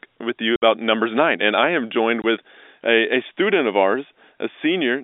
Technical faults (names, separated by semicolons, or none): packet loss filled with silence